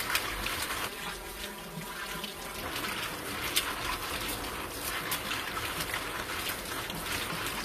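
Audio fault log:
Throughout: HE-AAC compression. The treble is plainly smeared and gritty, with nothing above 14.9 kHz. That's likely spectral band replication, which rebuilds the top end from copied lower bands, so the harmonics don't line up. It fits a low bitrate near 24 kbps.
0.88–2.63 s: channel delay (comb filtering). The sound goes hollow and phasey here. One channel seems to lag the other by around 5 ms before they're summed, so the shared content cancels at fixed notches starting near 100 Hz and repeating evenly up the spectrum.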